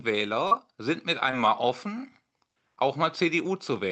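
A speech clip with short concealed packet loss: at 0.47–0.53 s and 1.31–1.35 s, audio arrived too late and was patched by extending the preceding sound, leaving brief smeared wobbles.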